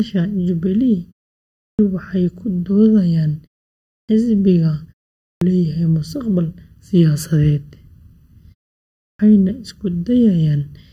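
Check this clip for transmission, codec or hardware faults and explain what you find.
Two faults are present: comb filtering running through the whole recording, and clipped starts after pauses.

The channel delay (comb filtering) lasts throughout. One channel trails the other by under a millisecond, so the mono sum cancels at evenly spaced frequencies starting around 700 Hz. The result is a hollow, phasey speech tone. Unlike codec dullness, these notches stay fixed regardless of content.

The clipped start after a pause occurs at 1.59, 3.86, 5.21 and 8.99 s. Each time, the output device wakes from silence too late, swallowing about 0.2 to 0.23 s, so speech begins abruptly.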